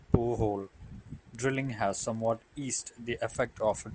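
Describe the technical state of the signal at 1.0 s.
At 1.0 s the signal is inside a stretch affected by a resampler restarted on every block, running from 0.3 s to the end of the clip. The conversion from 24 kHz down to 16 kHz was done on 50 ms blocks separately, so each block edge was computed without the true neighbouring samples and carries a small discontinuity. This is heard as a regular tick at 20 Hz that rides on the speech and drops away when the signal does.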